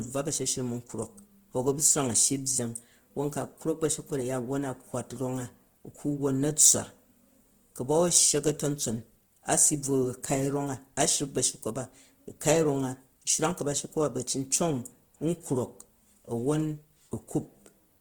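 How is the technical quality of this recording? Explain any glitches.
The recording carries one fault from start to finish: Opus compression. The encoder was likely starved of bits, which fits a rate near 16 kbps in its music (CELT) mode. It keeps each band's energy but fills the missing detail with folded or noise-like content. The speech therefore sounds plainly rough and grainy rather than swirly, while the full bandwidth survives up to about 20.2 kHz.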